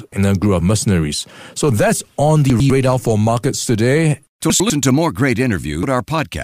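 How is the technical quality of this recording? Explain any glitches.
The recording has three audible glitches, two of one kind and one of another.

At 2.5 to 2.7 s, between "that's on" and "for markets today", and again at 4.5 to 4.7 s, just before "to more great", the sound briefly jumbles. These are chunks out of order: a 100 ms block plays one chunk late, swapping places with its neighbour and creating hard joins.

At 5.83 s, after "to more great", there is a short glitch. This comes from damaged data in a compressed stream, where the decoder loses sync and skips ahead to the next readable frame.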